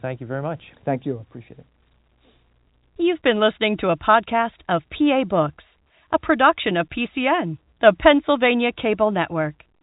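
No technical faults occur in this speech clip, which carries the narrow band of G.711 telephone coding with nothing above about 3.8 kHz.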